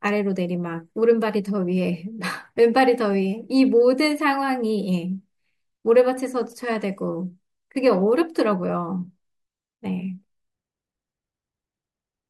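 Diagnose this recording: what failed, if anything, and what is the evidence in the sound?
Nothing failed; no stage shows any audible fault.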